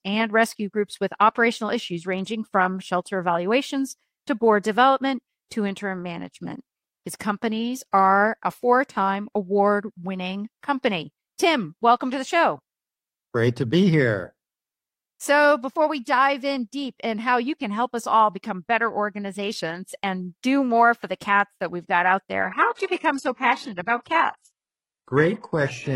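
At 22.42 s the audio switches abruptly, with no gap, to an adaptive stream at a lower bitrate, and stays there until the end at 25.96 s. The player evidently dropped to a cheaper rendition when throughput fell. Content above 11.5 kHz vanishes, the upper band turns synthetic and swirly, and coding artefacts thicken. The character fits a move from roughly 96 kbit/s AAC-LC to a very low-rate HE-AAC stream near 12 kbit/s.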